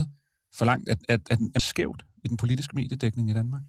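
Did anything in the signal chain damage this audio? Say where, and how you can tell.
Yes. In the network and jitter buffer stage, a skip ahead at about 1.59 to 1.61 s drops roughly 0.7 s of speech that was already queued. With nothing inserted to cover it, the audio on either side is spliced almost directly, so the speech jumps forward abruptly.

Also at the jitter buffer, a speed-up from 2.25 to 2.67 s trims short pitch-period slices repeatedly to reduce an overfilled buffer, cutting around 50 ms in total. The speech runs about 10% faster at unchanged pitch, giving a briefly hurried delivery.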